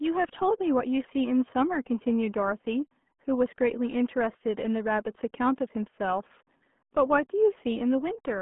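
From start to finish the speech runs through the RealAudio 14.4 codec, the old dial-up RealAudio 1 scheme, and the heavy coding damage fits a stream of about 8 kbit/s. The band is squeezed to roughly 150 Hz to 3.4 kHz, with nothing above 3.7 kHz, so the speech sounds muffled, boxy and gargly. A spectrogram shows a hard ceiling with empty space above it and smeared, blotchy harmonics below.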